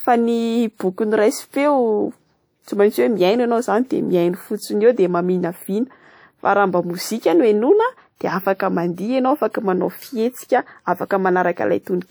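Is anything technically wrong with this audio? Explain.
Yes. At 2.63 to 2.68 s, a short hiss precedes a sharp attack in the speech, softening it: pre-echo, as the transform codec spreads quantisation noise across the whole block, here reaching 44 ms ahead of the attack.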